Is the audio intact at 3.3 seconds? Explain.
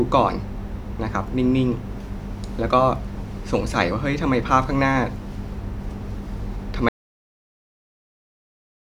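Yes, the audio at 3.3 seconds is intact, with no audible fault at that moment.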